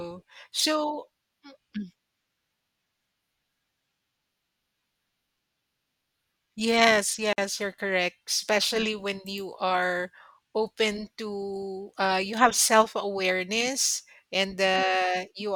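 At 7.33 s the speech just drops out for about 51 ms, then picks up right where it left off: a gap at a join of encoded pieces. Two separately encoded chunks were stitched together with their start-up delay and last-frame padding left in. The silence has smeared edges.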